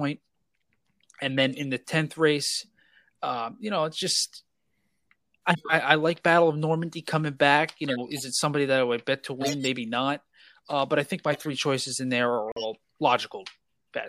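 Speech, with a corrupt frame decoded at 1.38 to 1.62 s, 5.52 to 5.72 s, 7.86 to 8.23 s, 9.41 to 9.66 s and 11.32 to 11.47 s. Each time, bits inside compressed frames were flipped. The decoder played them anyway. Misread gains and codes put energy at the wrong frequencies. The result is a chirp, squeak, blip or noise burst. Each spans several frames. The one at 11.32 s sits lowest in level.

At 12.49 s a corrupt frame is muted. The decoder rejected the damaged frames, and silence replaced them. The hole opens abruptly and lasts 0.15 s, which fits about three frame lengths. Timing after the gap stays intact.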